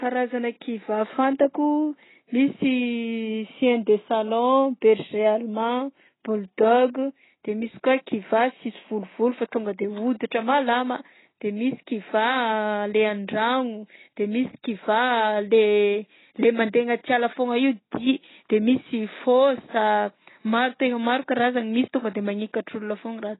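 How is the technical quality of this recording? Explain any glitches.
Technical quality is poor. The whole recording carries heavy lossy-coding damage that dulls and roughens the speech.

AAC compression, throughout: the sound matches a low-bitrate AAC-LC encode, likely around 16 kbps. With so few bits, the encoder discards everything above about 3.9 kHz and coarsely quantises what remains. Speech therefore sounds muffled and band-limited, with smeared consonants and a warbling, fizzy texture on sibilants and held vowels.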